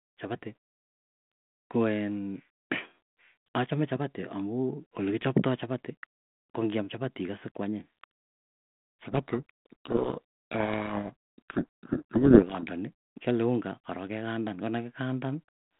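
Speech over a narrowband telephone path, limited to about 150 Hz to 3.4 kHz and carrying the light coding grain of 32 kbit/s G.726 ADPCM. From 9.01 to 12.64 s, a codec payload misread buries the speech in harsh distortion. The decoder is reading the G.726 code words with their bits in the wrong order, so the samples' difference values come out wrong. On a spectrogram, that stretch fills with dense broadband rasp up to the 3.4 kHz ceiling, and the waveform turns jagged and noise-like before clearing abruptly at 12.64 s.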